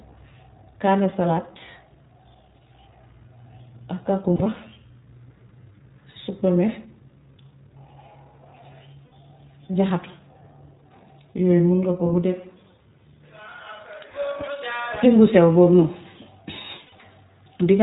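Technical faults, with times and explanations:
throughout: iLBC codec. The speech is confined to narrowband, with nothing above 4 kHz, and has a slightly rough, synthetic grain that is plainly audible. That fits iLBC in its 20 ms frame mode at a rate near 15 kbps. Each frame's excitation is coded on its own. Unlike a plain telephone band-limit, the band edge comes with a coded, rough and synthetic texture.
4.36–4.61 s, 6.10–6.17 s, 9.06–9.12 s, 16.86–16.93 s: lost iLBC frames. At 4.36 s, about 120 ms of audio is missing, spread over 240 ms in short holes of up to about 40 ms. Each later event is a single 60 ms gap. The decoder fills each hole by repeating the last pitch cycle with added noise, which sounds like a brief held, breathy vowel rather than silence or a click. Because each frame decodes independently, clean speech returns immediately afterwards, with no lingering smear.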